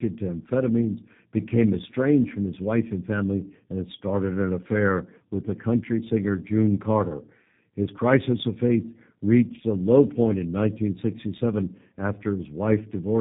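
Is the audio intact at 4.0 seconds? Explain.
No. At 4.0 s, as throughout, the speech shows tandem speech coding: it went through G.729A, then G.711 mu-law, then G.729A again, so the second coder re-encoded already degraded output. It sounds rough, muffled and warbly, with nothing above 3.8 kHz.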